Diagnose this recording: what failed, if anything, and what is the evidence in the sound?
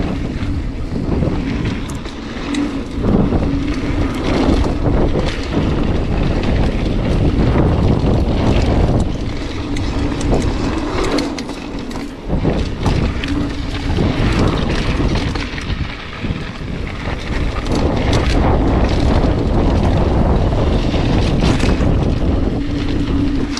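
Nothing failed; no stage shows any fault.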